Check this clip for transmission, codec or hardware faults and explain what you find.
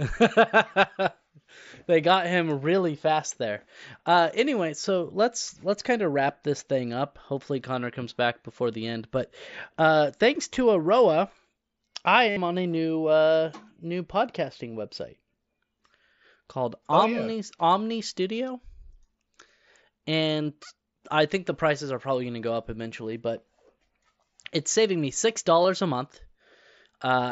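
Concealed Bluetooth headset packet loss occurs four times in this speech clip. Each loss is brief. The Bluetooth mSBC headset codec itself carries the speech normally.

Dropouts occur at 4.81 s (just before "let's let's kind of"), 10.54 s (right after "uh thanks"), 12.30 to 12.37 s (before "on a new uh") and 25.63 s. Lost headset packets were patched by repeating the best-matching recent stretch of waveform. The roughly 22 ms and 15 ms gaps are brief, while the 70 ms gap at 12.30 s holds a buzzy tone at full level, with a slight warble as real speech resumes.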